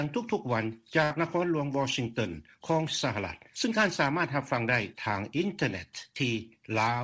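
A burst of packet loss hits from 1.04 to 1.12 s: consecutive packets never arrived in time, so the receiver stretched the last sound for about 64 ms while fading it. Playback then resumes roughly 60 ms further on, skipping that stretch, within a call-codec sound that stops at 8 kHz.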